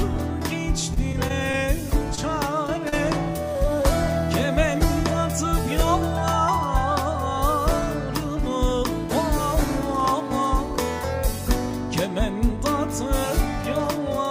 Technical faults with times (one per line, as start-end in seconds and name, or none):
0.81-1.55 repeated packet loss (robotic sound)
2.15-2.19 short concealed packet loss
2.67-2.94 short concealed packet loss